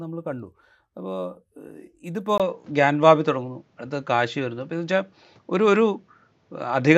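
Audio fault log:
2.38 to 6.98 s, input switched to a poorer device: after a 20 ms gap, speech dulls above 7.6 kHz with faint new background noise, likely a lesser microphone.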